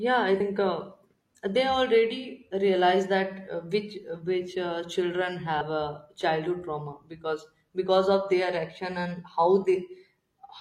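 At 0.36 to 0.42 s and again at 5.57 to 5.62 s, each lasting about 50 ms, the speech breaks up briefly because of damaged data in the compressed stream: corrupted bytes make the decoder misread those frames and lose sync until it locks onto a valid frame header.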